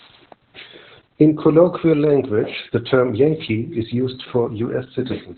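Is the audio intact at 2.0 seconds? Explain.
No. At 2.0 s, as across the whole clip, Opus voice compression in narrowband SILK mode cuts everything above 4.2 kHz, and heavy coarse coding, pointing to roughly 8 kbps, leaves the speech muffled, hoarse and slightly robotic.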